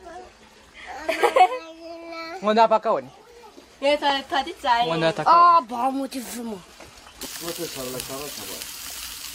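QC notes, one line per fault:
No faults found on this pass; nothing to log.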